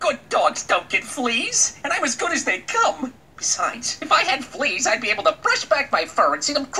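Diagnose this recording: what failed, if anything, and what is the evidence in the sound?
Nothing failed here; I can't hear anything in the recording that points to a problem at any stage of the chain.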